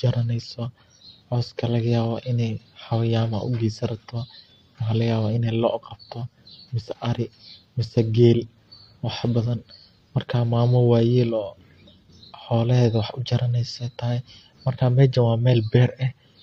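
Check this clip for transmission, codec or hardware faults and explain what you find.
Listening through the speech, nothing stood out as a problem.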